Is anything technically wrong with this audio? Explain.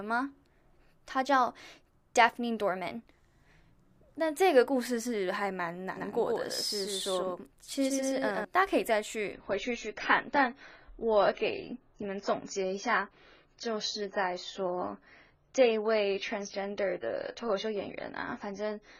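Yes, there are two faults.

A doubled audio track runs from 5.97 s to 8.45 s. A second full-band copy trails the original by roughly 150 ms at about 5 dB lower, likely because the signal was captured again through a slower path. The echo has no decay or room colour, and it starts and stops abruptly.

An adaptive stream at a lower bitrate takes over at 9.33 s and continues to the end. The stream switched to a leaner encoding, which fits a drop from around 96 to 16 kbit/s AAC. Nothing remains above 7 kHz, so the treble is suddenly dull, with more codec artefacts and no gap at the change.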